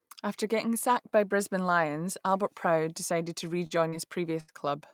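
Around 3.67 to 3.83 s there's a short stall from a late packet. A packet missed its slot, the jitter buffer ran dry, and the receiver stretched the last bit of speech by about 39 ms. Nothing's lost, but that sound hangs on slightly too long, and about 18 ms gets trimmed back out within this stretch to catch up.

Right after, from 3.89 to 3.95 s, you get a short concealed packet loss. About 40 ms of speech never made it to the decoder. The receiver papered over it with roughly 37 ms of continued sound before blending back, so it comes across as a quick smear or wobble.

Then at 4.40 to 4.51 s there's a burst of packet loss. The receiver kept the last sound going for about 78 ms, fading it as the gap went on, so you hear a held buzz or fading hiss. Speech picks up again with about 40 ms simply gone.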